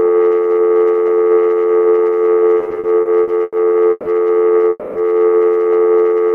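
Between 2.59 and 3.55 s the sound shows repeated stalls (stutter): eight short gaps, the longest 90 ms, bridged by stretching the last sound, about 250 ms in all, or roughly a quarter of that span. Packets arrived more slowly than playback consumed them, repeatedly draining the jitter buffer, so the audio drags and hiccups without losing content.

A call audio freeze follows at 3.91 to 4.08 s, a 150 ms held fill, and again at 4.70 to 4.98 s, where a 260 ms fading fill ends in about 10 ms of silence. The likely cause is packets held up in transit, emptying the buffer. Playback then resumes where it stopped, 150 ms and 260 ms later.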